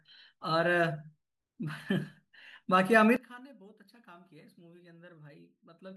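From 3.16 s to the end of the clip, one channel inverted is the likely cause of what happens to the speech: one side of the stereo pair appears to have flipped polarity, so the material both sides share cancels when the channels are combined to mono. The speech drops by about 22 dB at that point, leaving only a faint remnant built from the small differences between the channels rather than the full, centred sound heard before 3.16 s.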